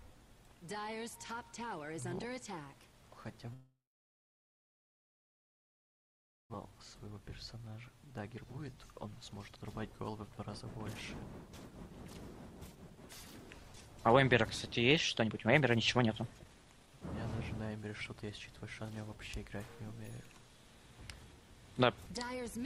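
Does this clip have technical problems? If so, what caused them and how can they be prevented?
Yes. From 3.53 to 6.56 s there is a long network dropout, likely from packets that stopped arriving. The receiver stretches the last sound into a brief fading buzz, then about 2.7 s of near-silence follows. About 1.6 s of audio never returns. On a waveform this is a short decaying tail and then a flat line. On a spectrogram, smeared bands fade into an empty region. More robust routing, redundancy or forward error correction would prevent it.

Six jitter buffer speed-ups follow as the receiver sheds the built-up delay, roughly a second and a half: 6.71–9.62 s at 110% speed, 10.08–10.39 s at 121%, 12.75–12.98 s at 126%, 13.73–14.43 s at 107%, 15.21–17.02 s at 139%, and 17.62–18.79 s at 110%. In each, short pitch-period slices are cut out, so the sound hurries at unchanged pitch. The worst is from 15.21 s, which loses about 0.7 s. 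Spectrograms show compressed timing with harmonics at the same height, and waveforms show periodic cycles of unchanged length with some cycles missing. Letting the buffer drain more gradually after a delay spike would prevent the hurried stretches.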